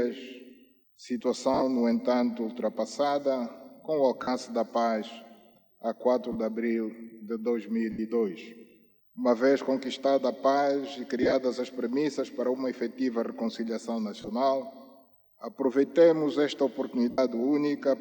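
Lost LE Audio frames break up the sound at 1.54 to 1.63, 4.23 to 4.28, 6.32 to 6.36, 7.92 to 7.99, 11.22 to 11.34, 14.22 to 14.28 and 17.11 to 17.18 seconds. Each gap runs 30 to 75 ms. The LC3 decoder fills it by replaying the last spectrum with scrambled signs, so tones smear into brief noise. At 1.54, 11.22 and 14.22 seconds the losses come scattered, in runs of about 30 ms. The light lossy compression underneath stays faint.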